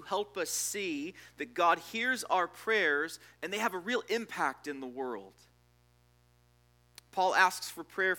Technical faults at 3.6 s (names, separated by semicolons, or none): mains buzz